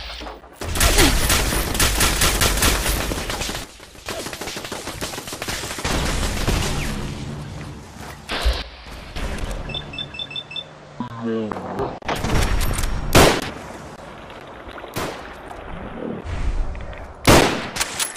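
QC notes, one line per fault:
3.64–4.06 s and 8.62–9.16 s: sudden gain jump. The level drops abruptly by about 14 dB in the first event and about 12 dB in the second. Each drop lasts about half a second and then snaps back. The background noise falls and returns together with the sound, in step. No fade softens either edge. The likely cause is a digital gain change applied from one sample to the next, with no ramp.
9.76–9.82 s and 12.64–12.71 s: DAB burbling. Two brief bursts of burbling sit over the programme, about 60 ms and 80 ms long. Short blips of noise land in single frequency bands. This points to a few corrupted MP2 frames in each burst. Weak reception let a small number of bit errors, around 0.1% and 0.2%, get past the error correction. Those errors scrambled samples.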